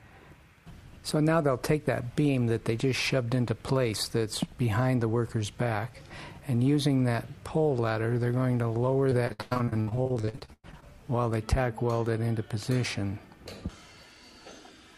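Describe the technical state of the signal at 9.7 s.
At 9.7 s the signal sits inside a stretch of repeated packet loss (robotic sound), running from 9.09 s to 10.84 s. About two dozen short dropouts hit in quick succession. Each hole is bridged by stretching the last good sound forward, so about 42 percent of the span is filled-in material rather than real audio. The longest gap lasts 103 ms. The result is choppy, with pieces of the sound missing.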